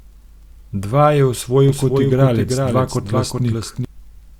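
From 1.69 to 3.85 s the speech is doubled: a full-band copy about 5 dB quieter trails by roughly 0.4 s, cutting in abruptly, likely a doubled audio track.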